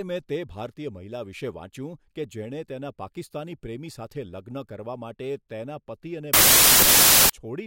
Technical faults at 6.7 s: wrong sample width

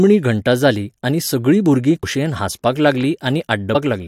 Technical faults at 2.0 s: compressed frames skipped

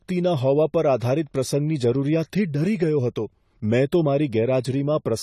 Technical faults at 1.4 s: AAC compression

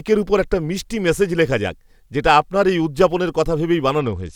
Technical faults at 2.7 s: none

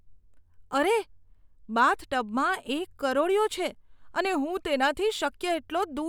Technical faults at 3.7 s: none

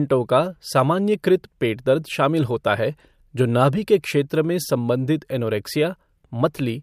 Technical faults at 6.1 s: none

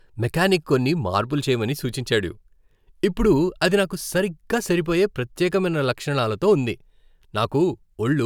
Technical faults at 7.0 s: none

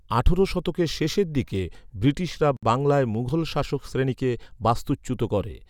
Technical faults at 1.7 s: none

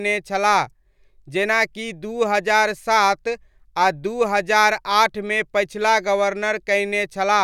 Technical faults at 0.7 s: none

